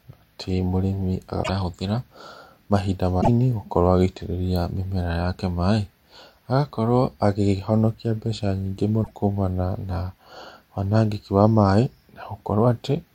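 Damaged data in a compressed stream occurs three times in this speech: from 1.40 to 1.49 s, 3.18 to 3.29 s, and 9.00 to 9.11 s. In each stretch the stored bytes no longer match what the encoder wrote, so the decoder misreads those frames, loses its place, and hunts for the next valid frame header before recovering. Each event lasts roughly a tenth of a second and is heard as a brief chirp, squawk, click or short hole cutting across the speech.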